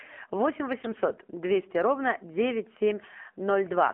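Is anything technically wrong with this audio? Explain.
Yes. The speech has passed through an AMR narrowband mobile codec for its whole length. The audio was squeezed into the 2G/3G phone codec, which samples at 8 kHz and rebuilds speech from a vocal-tract model fed by a handful of pulses per 5 ms subframe. Here the band runs only from about 250 Hz to 3.4 kHz, with nothing above 4 kHz, so it sounds thin and boxed-in. The damage is plainly audible: a buzzy, synthetic edge whose coarseness fits a low bitrate of around 7.4 kbps.

There are also AMR bit errors from 0.80 to 0.98 s. On a weak radio link, some of the lightly protected bits in the codec frames arrived flipped while the checksum on the critical bits still passed, so the decoder used them. With an error rate of a few percent, the excitation pulses landed in the wrong positions and the finer pitch, gain and spectral values were skewed. 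For that brief stretch, which spans several consecutive frames, the speech keeps roughly its pitch and loudness but turns hoarse, scratchy and gargly.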